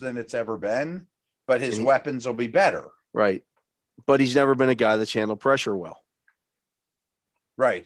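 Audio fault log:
No faults are heard anywhere in this speech.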